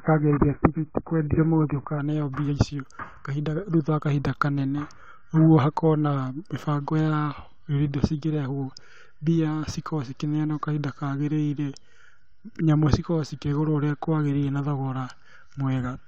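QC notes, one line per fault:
0.00 to 2.00 s, adaptive stream starting at a low bitrate: the player opened on a low-bitrate rendition to start quickly, then switched to a higher one once it had gauged the connection. Until the switch nothing reaches above 2.5 kHz, so the speech is dull and muffled with stronger coding smear, which fits AAC at around 12 kbit/s. Clarity then jumps abruptly, with no gap, just before "mbia icio", consistent with a step up to roughly 96 kbit/s.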